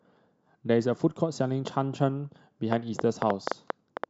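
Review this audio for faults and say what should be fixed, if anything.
Electrical interference or a faulty connection or power supply is likely injecting short pulses from 2.73 to 4.05 s. The result is a train of clicks: about ten similar pops at 6.1 per second, unevenly spaced, standing well above the speech and audible through the pauses. Shielding the cables and moving the interface away from other equipment would prevent it.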